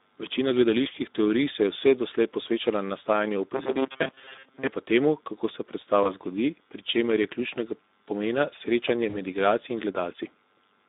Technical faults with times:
0.00-10.88 Speex codec
3.55-4.67 robotic sound from repeated short buffers
6.03-6.14 VoIP packet loss concealed by the speech codec
9.09-9.17 VoIP packet loss concealed by the speech codec

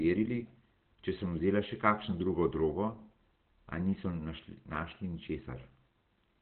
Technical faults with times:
0.00-6.42 Opus compression
4.75 dropped samples

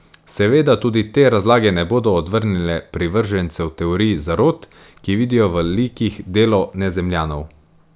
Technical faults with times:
none

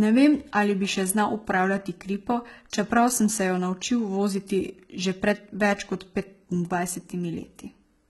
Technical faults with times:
0.00-8.09 HE-AAC compression
2.70-2.73 pre-echo

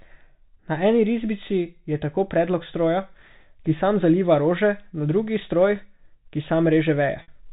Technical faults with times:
7.22-7.28 packet loss with pitch repetition

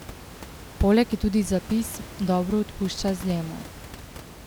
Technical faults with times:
none

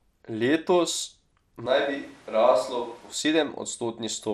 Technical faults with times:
0.00-4.33 MP2 compression
1.66-3.13 switch to a distant microphone

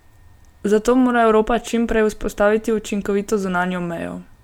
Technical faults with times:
none

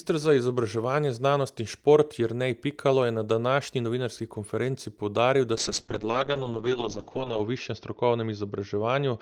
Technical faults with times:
5.56-9.21 call bitrate drop

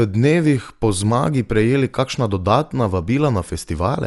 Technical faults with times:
0.00-4.06 Dolby Digital compression

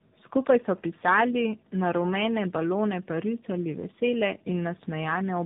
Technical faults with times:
0.00-5.45 tandem speech coding

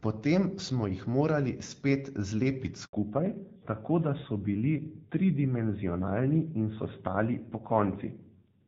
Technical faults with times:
2.85-2.93 handover gap
2.93-8.68 fallback to narrowband

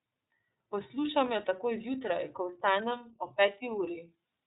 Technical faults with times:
0.00-4.46 iLBC codec

